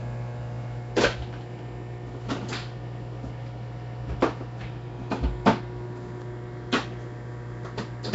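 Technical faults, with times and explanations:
Throughout, Nellymoser compression: the audio carries a rough, hissy halo and a smeared, underwater quality, with plainly audible codec damage and nothing above 7.7 kHz. The likely cause is the Flash-era Nellymoser Asao codec, at a rate that fits roughly 32 kbps. It spends a fixed, small bit budget on each short block, so weaker bands receive no bits and are refilled with synthetic noise, which blurs detail and adds that grainy wash.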